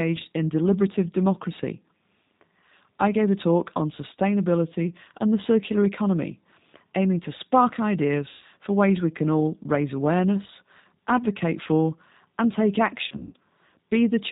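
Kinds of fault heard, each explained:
G.729 codec, throughout: an 8 kbit/s coder rebuilds speech from a filter, pitch predictor and pulses, leaving plainly audible roughness and nothing above 4 kHz.
VoIP packet loss concealed by the speech codec, 8.29 to 8.45 s and 13.08 to 13.34 s: the decoder stretches its last pitch and filter into a fading buzzy tone or coloured noise where packets are missing.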